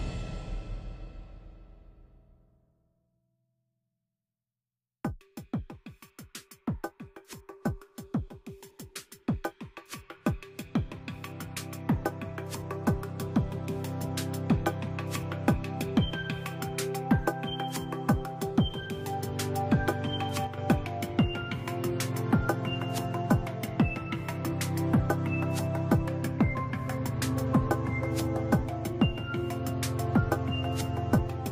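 At 20.47 s the level drops abruptly by about 6 dB and stays down until 20.58 s, a gap of roughly 110 ms before it snaps back. The pattern is consistent with one channel dropping out, likely a brief loss of one side of the stereo feed. Once the two channels are summed to mono, material common to both falls by half, and anything carried only in the lost side vanishes for that moment. The sound comes across as a short, abrupt dip.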